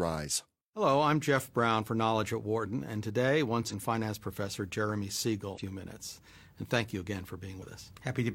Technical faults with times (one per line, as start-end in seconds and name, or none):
3.67-3.73 damaged data in a compressed stream
5.53-5.59 damaged data in a compressed stream
7.57-7.62 damaged data in a compressed stream